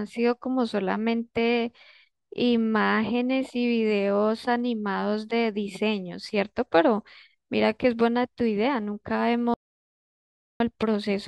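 Speech, with an audio dropout to silence at 9.54–10.60 s: the sound goes completely dead, with no room tone, likely from lost input while recording continued.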